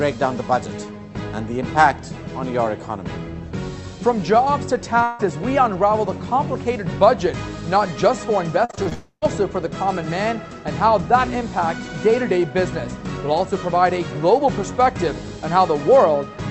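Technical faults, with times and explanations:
5.03 to 5.21 s, long network dropout: about 0.16 s of audio goes missing and never comes back. The gap isn't silent. The receiver keeps stretching the last bit of sound into a smeared buzz that covers the whole hole, so it sounds like a brief drawn-out blur rather than a clean cut. This is most likely a burst of lost packets. On this call path the band already stops around 8 kHz.
8.65 to 8.93 s, repeated packet loss (robotic sound): five short holes land close together, the longest about 39 ms, and roughly 43% of this stretch is patched rather than real audio. Each patch repeats the last fragment, and the next gap arrives before things settle. That gives a choppy stutter with small pieces missing. It leads straight into the next fault.
8.93 to 9.26 s, long network dropout: right after the choppy patch, about 0.28 s is lost outright. Concealment carries the last sound as a fading buzz for a couple of tenths of a second, then about 100 ms of silence follows before audio resumes, with a few milliseconds trimmed at the rejoin. 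It's likely the same network trouble getting worse into a full outage.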